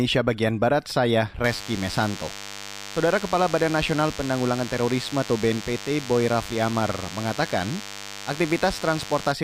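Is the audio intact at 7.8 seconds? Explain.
No, not at 7.8 seconds. There's a DECT cordless phone buzz running from about 1.44 s to 9.32 s, so that moment sits right in the middle of it. A nearby DECT handset or base is firing radio bursts 100 times a second, and something in the audio path is rectifying them into sound. You hear it as a thin, steady, harmonic-rich 100 Hz buzz sitting roughly 15 dB under the speech.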